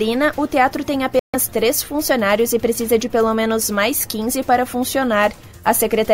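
At 1.19 s the audio drops to silence for about 144 ms, resuming at 1.35 s. The pattern is consistent with a Bluetooth stall, likely caused by interference delaying packets until the headphones' buffer emptied and playback waited for retransmissions.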